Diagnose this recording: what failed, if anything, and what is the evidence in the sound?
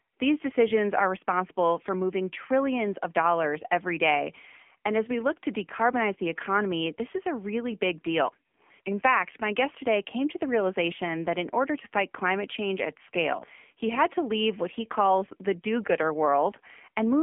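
The speech runs through an AMR narrowband mobile codec from start to finish. This is a codec-stage fault. Nothing passes above 3.5 kHz, the band sits at roughly 250 Hz to 3.4 kHz, and the voice sounds plainly buzzy and synthetic. That points to a low mode near 7.4 kbps, where few pulses drive the vocal-tract model.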